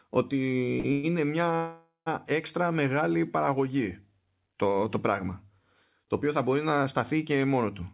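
At 0.80 s there is a short stall from a late packet. A packet arrived late and the jitter buffer ran dry. The last sound is held for about 40 ms, with a faint buzz or dip, then the speech resumes where it left off. Nothing is lost.

At 0.92 s comes a call audio freeze lasting about 110 ms. The sound stretches into a fading buzz or hiss, then picks up again at 1.05 s. A longer freeze runs from 1.55 s to 2.08 s, about 510 ms. It fades and sits silent for 140 ms before the audio restarts. Packets were likely held up in transit. No speech is missing, but each freeze pushes the rest of the speech later. The narrowband call sound, with nothing above 4 kHz, carries through both freezes.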